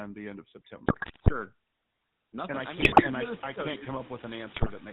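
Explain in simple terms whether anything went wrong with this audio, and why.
Three things went wrong, and they stack on top of each other.

The whole clip has GSM full-rate codec damage. This is the old mobile phone codec. It builds the voice from a simple model driven by evenly spaced pulses, and it drops everything above 4 kHz. So the speech sounds buzzy, gravelly and muffled all the way through.

There are also noise suppressor artifacts throughout. A suppressor pushes down whatever it judges to be steady background hiss. Here it cuts that hiss hard. The background dips away between phrases and swells back under them. After about 2.5 s the room noise itself gets louder.

Finally, GSM bit errors break up the sound three times: from 0.86 to 1.31 s, from 2.80 to 3.04 s, and from 4.56 to 4.73 s. Corrupted data reached the decoder. It briefly rebuilt the sound with the wrong tone and loudness, so you hear squawks, pops and gargling.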